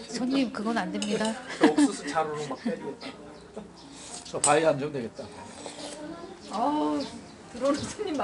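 4-bit ADPCM compression runs through the whole clip. Each sample is coded as a coarse 4-bit step from a predicted value, with the step size adapting as it goes. The resulting error is a gritty hiss that rides on every loud passage and plainly roughens sharp attacks, where the step cannot grow quickly enough. Nothing is present above 10.6 kHz, which dulls the top end and fits a data rate of about 88 kbps.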